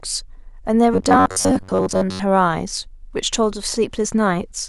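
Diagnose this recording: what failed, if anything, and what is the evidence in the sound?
From 0.94 to 2.24 s the speech collapses into robotic sound from repeated short buffers: a rigid, metallic buzz at a steady 93.8 Hz that still roughly tracks the syllables. The stage is the driver or buffer, most likely an underrun where the last 10.7 ms chunk is replayed while fresh audio is skipped, for most of that span. Unlike codec warble, the buzz stays locked at one over the chunk length.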